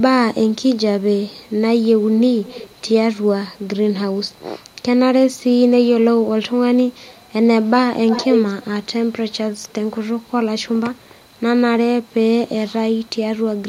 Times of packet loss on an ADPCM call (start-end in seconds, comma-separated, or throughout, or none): none